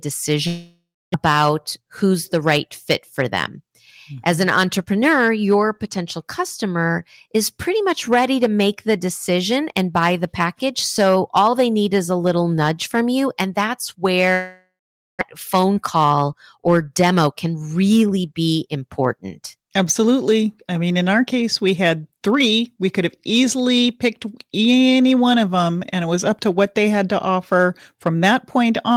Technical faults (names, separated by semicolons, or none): hard clipping; long network dropout; jitter buffer speed-up